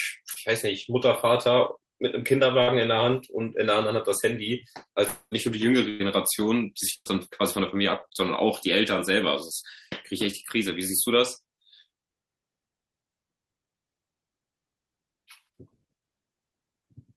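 A speech recording with several network-loss faults. At 0.33 to 0.38 s there is a short concealed packet loss. About 20 ms of audio never arrived, and the decoder papered over it by extending the preceding sound, leaving a brief smear. Bursts of packet loss occur at 2.62 to 2.69 s, 5.89 to 6.02 s and 6.94 to 7.07 s. Roughly 60, 100 and 120 ms go missing. Each time the last sound is stretched and faded, then speech jumps ahead. The final burst drops to silence for about 40 ms before resuming. From 5.07 to 5.33 s the sound is held and fades away for about 240 ms. It ends in around 30 ms of silence, and then speech resumes further on. This is likely a long network dropout, with that stretch of audio lost entirely.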